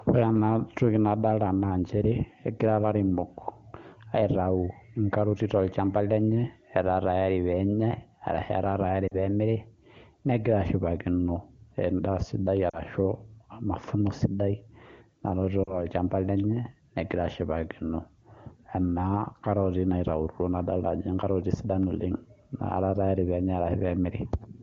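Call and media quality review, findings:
Lost AMR speech frames at 9.08–9.15 s, 12.70–12.80 s and 15.64–15.85 s. Each drops to near silence, 40 ms lost, which fits two dropped 20 ms frames. Likely cause: radio errors failing the frame checksum. The decoder repeated the last good pitch and vocal tract settings at falling gain.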